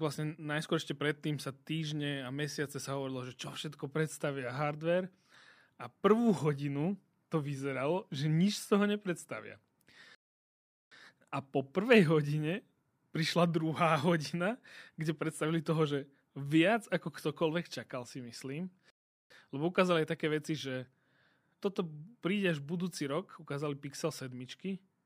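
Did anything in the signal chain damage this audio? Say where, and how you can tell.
Yes, though nothing is actually lost. It's a rebuffering stall at the playback stage: the player drained its download buffer and sat silent until more data turned up. The speech drops to silence from 10.15 to 10.92 s, adding about 0.77 s, and again from 18.90 to 19.30 s, right after "ktokoľvek čakal si myslím", adding about 0.4 s. Each time it picks up exactly where it stopped, with no skipped audio. You just get dead air inserted.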